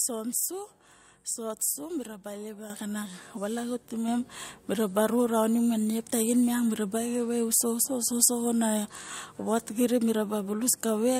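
At 2.7 s the microphone volume steps up by about 8 dB, then again at 4.08 s by about 4 dB. The input gain jumps in single steps, so the speech and the background noise rise together and instantly, unlike a compressor or gain control that ramps gradually.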